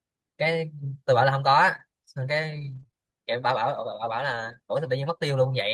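Between 1.71 and 2.94 s, the speech has brief ticks and hiccups from scattered short gaps: about three lost or late packets, the longest around 30 ms, each patched by continuing the previous sound. From 4.32 to 4.54 s, the speech turns rough and noisy without any gap. This is a lost packet rebuilt from error correction: about 120 ms of audio, which points to several lost packets, replayed from low-bitrate copies.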